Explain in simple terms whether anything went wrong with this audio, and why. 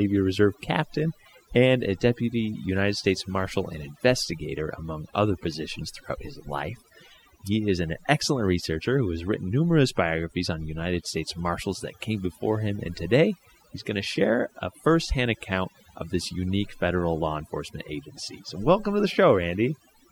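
Overdone noise removal runs through the entire clip, from start to finish. A noise-cleaning tool was pushed too hard, so it mutes any sound resembling the background noise, including softer parts of the speech. Pauses sound eerily silent with faint twinkling specks.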